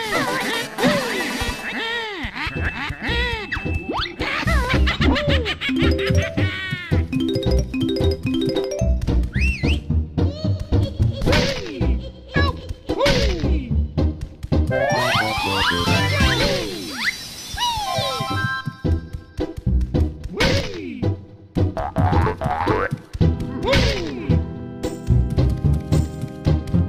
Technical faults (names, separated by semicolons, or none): GSM phone buzz; overlap between stream segments